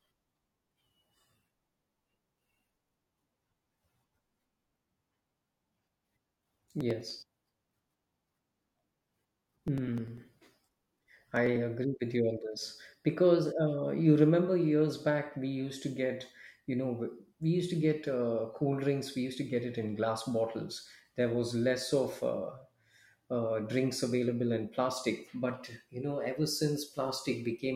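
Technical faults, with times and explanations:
3.84 to 11.56 s: periodic USB or driver dropouts. Through this stretch of the speech, a tiny slice of audio, around a millisecond, goes missing every 0.099 s, about ten times a second and roughly seventy times in all. The missing samples are skipped rather than filled, so the waveform jumps across each gap. That discontinuity produces a regular ticking that rides on the voice and vanishes in pauses, the mark of a background task stalling the bus or driver at a fixed interval.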